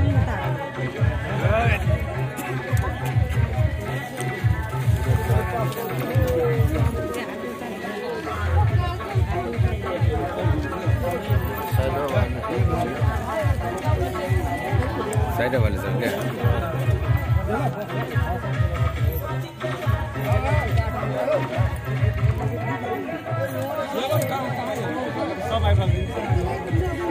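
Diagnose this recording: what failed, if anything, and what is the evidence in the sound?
Nothing in the recording points to a failure at any stage of the chain. No event in the sound calls for a diagnosis.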